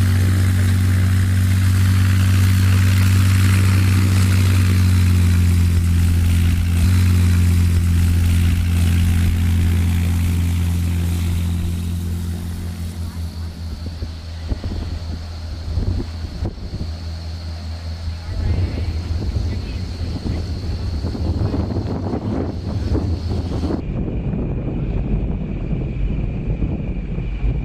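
From 23.8 s to the end at 27.6 s, a section at the wrong speed plays at 0.55 times its proper rate. The sound turns slow and drags, and its pitch drops by about ten semitones. The likely cause is playback against the wrong clock.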